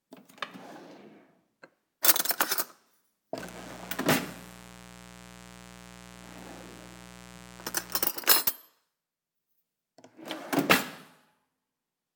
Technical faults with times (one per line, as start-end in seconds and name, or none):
3.36-8.10 mains buzz